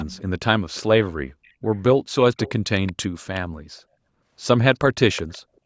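A faint delayed copy of the speech returns in short scraps at 0.0–0.21, 0.74–0.82, 1.44–1.52, 2.38–2.5, 2.86–2.93, 3.34–3.4 and 5.13–5.38 s. This is an echo leak, likely from a far-end loudspeaker whose echo canceller let residue through. The copy trails by 374 ms and sits about 15 to 35 dB below the voice. On a spectrogram it appears as weak, smeared repeats of earlier harmonic patterns. In the waveform it shows as low-level ripples beside louder speech.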